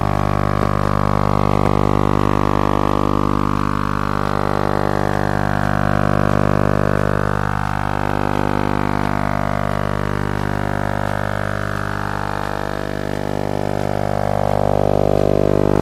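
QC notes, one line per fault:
No technical faults heard anywhere in the clip.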